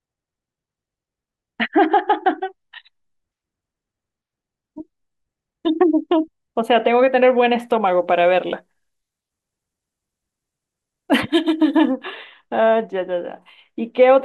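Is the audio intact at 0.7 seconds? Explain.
Yes, the speech at 0.7 seconds is intact, with no dropout, click, distortion or other fault at that moment.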